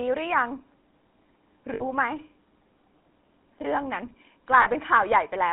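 The whole recording runs through a GSM full-rate codec, which fits a 13 kbps coder: pulse-driven vocal-tract modelling on a 3.4 kHz line band gives the speech a plainly audible buzzy, gravelly roughness. From 1.74 to 1.82 s and again from 4.62 to 4.67 s, lost GSM frames were patched by repeating the last good frame, so the sound briefly freezes into a rough metallic ring. The gaps last 60 ms and 40 ms, which fits three and two lost frames.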